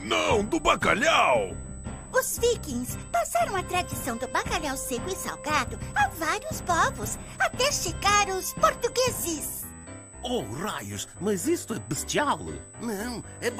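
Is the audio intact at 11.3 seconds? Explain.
No. At 11.3 seconds, as throughout the clip, USB whine is present. Current drawn by the USB bus in 125-microsecond microframes is leaking into the audio path through the power or ground, which puts a steady, fixed-pitch tone at 8 kHz into the signal. It sits roughly 20 dB below the main sound, loud enough to be heard as a thin, high whistle riding continuously over everything at that moment.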